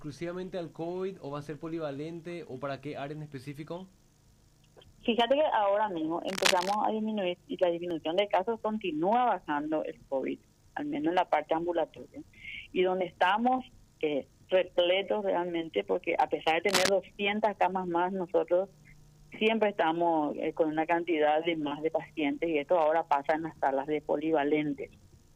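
From 6.28 to 6.75 s and again from 16.69 to 16.89 s, cable scratch noise breaks in at about the level of the sound itself. It is most likely a worn cable or connector being moved, its contact resistance flickering. It sounds like brief rustling scratches, and shows as ragged broadband smears on a spectrogram and jagged bursts on the waveform.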